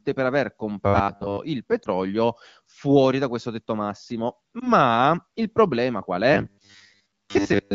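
From 0.86 to 1.37 s the speech takes on a rigid metallic buzz at 100 Hz, robotic sound from repeated short buffers. It is likely caused by late audio being filled with 10 ms repeats while most of the real signal is skipped.

At 1.84 s and again at 4.60 to 4.72 s there are lost AMR speech frames. Each time the decoder conceals one missing 20 ms frame, giving a brief dip or warble before the voice recovers.

The same 100 Hz robotic buzz returns from 6.34 s to 7.74 s, running through to the end of the clip.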